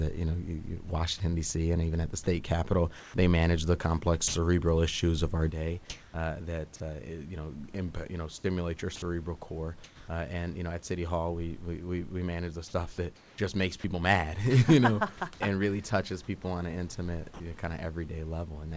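From 2.24 to 4.34 s the speech turns choppy, with about 220 ms in total swapped for synthetic hiss. This is sound chopped by the voice detector, likely because it repeatedly toggled transmission off during quiet syllables.

Between 5.90 and 6.14 s the room background becomes a smooth, featureless noise whose level shifts by about 8 dB. This is comfort noise in place of the background, likely generated by the receiver during a pause in transmission.

At 8.96 to 9.02 s a 60 ms gap of steady noise removes about 40 ms of speech. This is sound dropped by the voice detector, likely after it mistook a quiet word edge for background. Comfort noise in place of the background then runs through 10.08 s, about 300 ms of it synthetic, likely from the same pause in sending.

From 13.16 to 13.84 s the background again goes flat for about 260 ms, likely comfort noise filling a gap in transmission. Near its end, at 13.80 to 13.84 s, sound dropped by the voice detector clips about 20 ms of speech, likely because the detector took quiet speech for background.

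At 17.34 to 17.40 s a further 60 ms dropout loses about 40 ms of speech to steady noise, likely the voice detector again treating a soft speech ending as background.

Throughout, the audio has nothing above 8 kHz, which fits a wideband call codec such as G.722.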